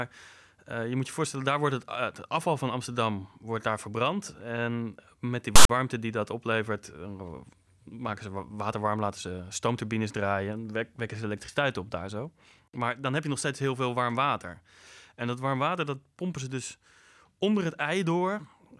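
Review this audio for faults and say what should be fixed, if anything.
File tags played as audio from 5.56 to 5.69 s, between "met die" and "die dat oplevert". Tag text read as samples gives a hard-edged rasp pushed to one side, then zero padding drops to silence, unlike a centred, noise-like codec glitch. To prevent it, the decoder or editor should skip tag blocks by their declared size so that only real audio frames reach playback.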